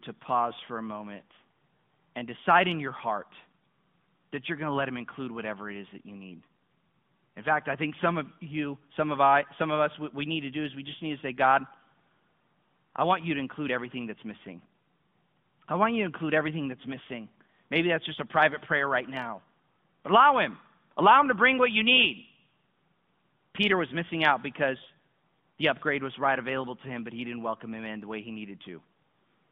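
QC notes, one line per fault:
Throughout: AMR narrowband mobile codec. The speech has passed through an AMR-NB encoder at a rate consistent with about 10.2 kbps. The encoder samples at 8 kHz and rebuilds the voice from a vocal tract model fed by a pitch predictor and a small set of pulses per 5 ms subframe. Nothing above 4 kHz survives, and the line band sits at 150 Hz to 3.5 kHz, so the speech sounds thin and boxy. The codec damage is plainly audible as a buzzy, synthetic quality.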